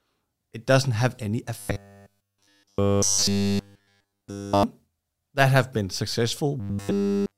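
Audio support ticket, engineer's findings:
Robotic sound from repeated short buffers, 1.59–4.63 s, right after "it doesn't have any". Rigid metallic buzz at 100 Hz replaces the speech. Likely cause is late buffer delivery, with a 10 ms block looped while essentially all real audio is skipped.

Same robotic buzz, 6.60 s to clip end. Again fixed at 100 Hz, which fits a likely 10 ms buffer repeating in place of the incoming audio throughout.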